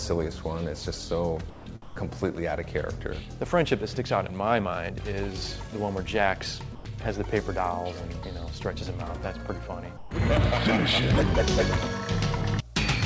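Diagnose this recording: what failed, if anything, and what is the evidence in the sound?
Call processing: at 1.50–1.66, 1.82–1.96, 6.75–6.85 and 9.97–10.11 s the sound gives way to smooth comfort noise, not packet-loss stutter, likely sound dropped by the voice detector.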